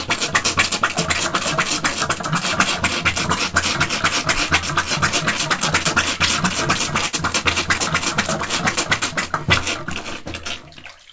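Everyday sound carried over a call path whose content stops at 8 kHz, consistent with G.722 at 64 kbps. From 7.06 to 7.15 s the sound hangs, held on for about 71 ms. This is a short stall from a late packet: the jitter buffer ran dry, so the receiver extended the last audio until the packet came, then resumed where it left off. Nothing is lost, but everything afterward plays 71 ms later.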